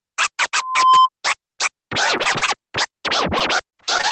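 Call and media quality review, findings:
Steady 1 kHz tone swelling into a squeal, 0.54–1.09 s, building over a bit under half a second to a few dB above the program. Loudspeaker feedback squeal: mic re-captures its own speaker output, loop gain above one at 1 kHz.

Choppy, metallic stutter, 2.17–2.94 s and 3.38 s to end, roughly a fifth then a tenth of each stretch patched, gaps up to 31 ms. Repeated packet loss (robotic sound): jitter buffer concealment repeats the last sound into each hole.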